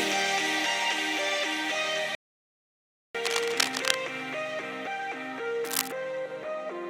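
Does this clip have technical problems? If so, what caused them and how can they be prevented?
Yes. At 2.15 s the sound stops mid-flow and stays silent for about 1.0 s, resuming at 3.15 s. This playback stall likely came from the player running out of buffered data or having its thread blocked. A larger playback buffer and a higher-priority audio thread prevent it.

From 3.25 to 3.96 s, and again from 5.64 to 5.92 s, dense, uneven scratching bursts sit over the sound at roughly its own loudness. This cable scratch noise likely comes from a worn cable, connector or control being moved, making its contact resistance jump. Replacing worn leads and securing connections prevents it.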